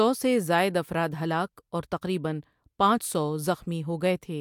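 Nothing in the speech stood out as a technical problem on listening.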